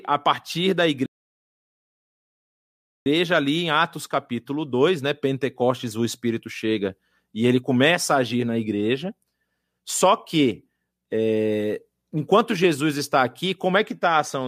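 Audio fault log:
1.06 to 3.06 s, playback stall. The speech breaks off just after "a partir da" and the output goes silent for 2 s. It picks up again at "ali em". The break lands mid-flow, not at a natural pause, so it sounds like a halt rather than a breath. The likely cause is a player that ran out of data or had its thread blocked, producing nothing until it recovered.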